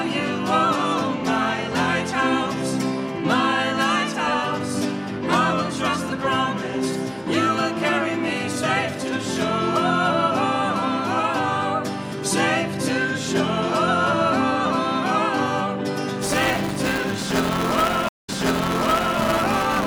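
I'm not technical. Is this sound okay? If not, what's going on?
No. There are two problems near the end.

Buffer tearing runs from 16.22 s to the end of the clip. The sound picks up a robotic buzz at 200 Hz, about two hundred clicks a second. The software filling the audio buffer and the hardware playing it have drifted out of step. In each cycle, a small slice of the audio, only a few percent, is left over from about a hundredth of a second earlier. That creates hard joins that rattle whenever sound is playing.

A stream reconnect happens from 18.09 s to 19.19 s. The connection dropped, and the sound cuts to silence for about 0.17 s. The player then reconnects and starts decoding fresh. The audio doesn't pick up where it left off. It jumps back about 0.94 s, so you hear a short stretch repeated. The first moment after the restart comes in muted or fading up.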